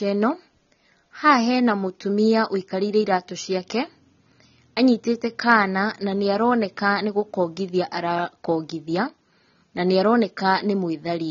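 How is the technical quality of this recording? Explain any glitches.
The recording is clearly degraded by heavy lossy coding. AAC compression affects the whole clip: the speech has nothing above 6.9 kHz. The likely cause is AAC-LC encoding at a bitrate that fits about 24 kbps, which discards and coarsely quantises frequency detail. The result sounds dull and smeared, with a warbling, fizzy texture on sibilants.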